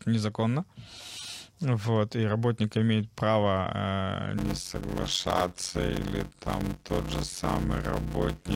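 From 4.37 s, block size mismatch (padded) writes 256-sample blocks and fills the rest of each block with zero gaps: 92 Hz buzz, speech slowed to 0.533, timbre unchanged; the waveform shows evenly spaced silent notches.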